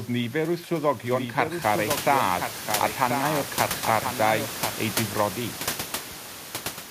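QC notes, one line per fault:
1.04–4.92 s: doubled audio track. A full-band second copy of the speech trails about one second behind, around 5 dB quieter, with no decay or room colour, and it starts and stops abruptly. This likely comes from a slower second capture path mixed in.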